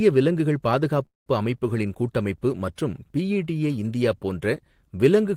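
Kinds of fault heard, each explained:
Call audio freeze: at 1.05 to 1.28 s the speech stops and the last sound lingers as a fading buzz or hiss, then about 160 ms of silence, before "அமைப்புகளின் கூட்டமைப்பு மற்றும் பிஇடிஏ" resumes intact. Likely a jitter buffer running dry. The spectrogram shows a smeared, decaying band, then a blank gap.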